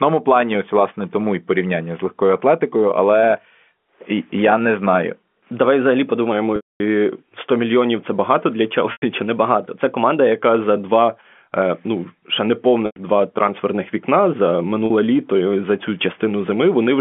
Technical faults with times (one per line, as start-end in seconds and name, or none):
4.40-6.32 drift correction step
6.56-6.80 packet loss with pitch repetition
8.92-9.02 packet loss with pitch repetition
9.26-10.39 drift correction step
12.86-12.96 packet loss with pitch repetition
14.86-14.90 packet loss with pitch repetition